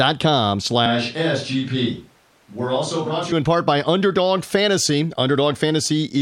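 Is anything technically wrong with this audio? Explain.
Yes. From 0.86 to 3.32 s the speech abruptly turns roomy and hollow, with thinner bass. It drops roughly 5 dB, and room noise rises to about 35 dB below the speech. This is likely a switch to a distant microphone after the close one dropped out.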